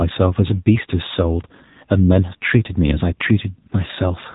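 From start to finish the speech carries AMR narrowband mobile codec damage. The band stops at about 3.8 kHz, so sibilants and breath lose their top end and the sound takes on a boxed-in telephone quality. The codec rebuilds the voice from a vocal-tract model excited by a few pulses per 5 ms subframe. The coding artefacts are plainly audible as a buzzy, synthetic edge, which fits a low-rate mode around 7.4 kbps.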